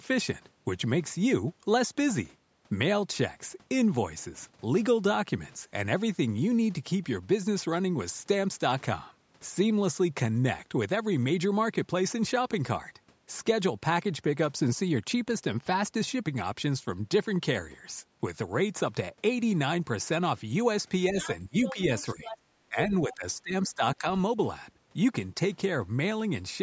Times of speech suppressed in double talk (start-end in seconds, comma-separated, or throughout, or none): 21.11-21.78, 22.15-24.07